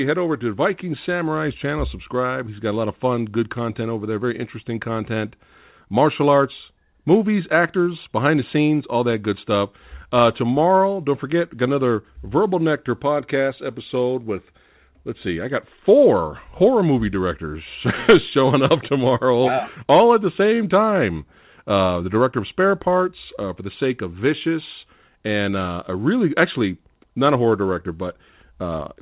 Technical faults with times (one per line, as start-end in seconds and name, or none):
10.78-10.81 short stall from a late packet
20.56-20.59 short stall from a late packet